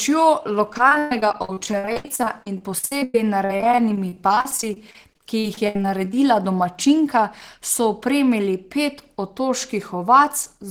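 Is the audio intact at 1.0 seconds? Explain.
No. At 1.0 s the speech is choppy, with bits of sound dropping out. This is repeated packet loss (robotic sound), running from 0.71 s to 6.14 s. Dozens of short holes, none longer than 120 ms, are each patched by stretching the last received sound, and the next hole arrives soon after. About a quarter of that stretch is concealed sound rather than real audio.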